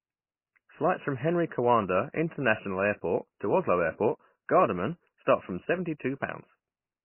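Throughout the speech, everything above 3 kHz is missing, and the remaining sound warbles with a watery, swirling texture, likely from heavy MP3 compression at a very low bitrate, roughly 16 kbps. Starved of bits, the encoder chops the treble and drops weak frequency lines that flicker between frames. That flicker sets it apart from a simple low-pass filter, which would sound dull but steady.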